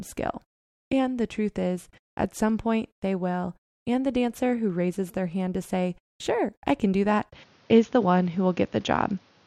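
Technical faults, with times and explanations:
7.32 to 9.46 s, input switched to a poorer device: right after "I can do that" the sound turns duller, losing everything above 6.8 kHz, with no gap but a level jump of roughly 5 dB and new background noise, likely from recording moving to a narrower-band microphone.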